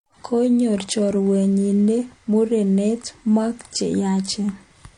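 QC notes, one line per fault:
Throughout: transcoding between lossy codecs. The speech has nothing above 10.6 kHz, with grainy, smeared highs and swirly artefacts layered together. This fits a low-rate MP3 likely re-encoded to HE-AAC, each pass adding its own artefacts while the lowest cut-off remains.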